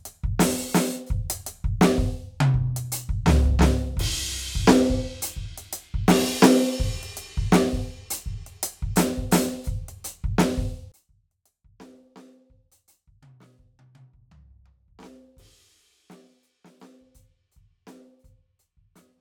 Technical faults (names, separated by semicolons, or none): one channel inverted